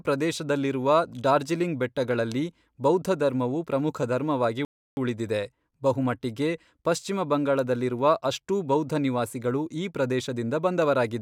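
At 4.65 s the speech drops abruptly into silence and stays silent until 4.97 s, then picks up at exactly the point where it broke off, with nothing skipped and nothing repeated. That is a rebuffering stall: playback used up all the audio it had downloaded and halted while waiting for more data to arrive. The gap adds about 321 ms to the running time without losing any of the original sound.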